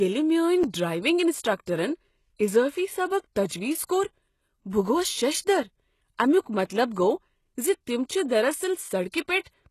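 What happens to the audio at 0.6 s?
A block of digital silence occurs at about 0.64 s, lasting 5.3 ms, which fits a 256-sample buffer. Zeros replace the audio there, either because the output buffer was not filled in time or because a calculation produced invalid numbers. Because the gap is so short and has no fade, it is heard as a tick or dip rather than as silence.

Across this moment, as throughout the clip, the codec damage is plainly audible and nothing is present above 12.3 kHz. The likely cause is HE-AAC compression at a bitrate around 16 kbps. The treble is rebuilt by copying lower bands upward, so harmonics do not line up across the crossover, and s sounds come out gritty, metallic or lispy.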